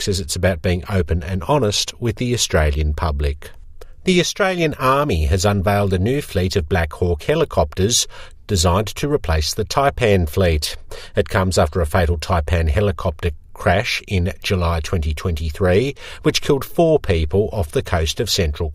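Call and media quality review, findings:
No audible faults found; nothing to flag.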